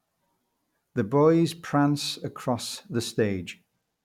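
Speech recording, no technical faults audible: level, timing and signal path hold steady throughout.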